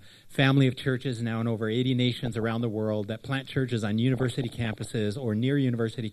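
At 2.12 to 2.61 s, and again more heavily at 4.14 to 4.88 s, there's DAB burbling: bit errors slipping past error correction corrupt MP2 scale factors, so individual sub-bands jump for a frame, giving a few watery blips in the first burst and a bubbling, chirpy squelch in the second, worse in the second burst.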